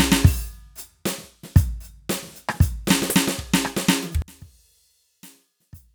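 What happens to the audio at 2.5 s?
Nothing goes wrong at 2.5 s: the music plays through that moment intact, with no dropout, click or other audible fault.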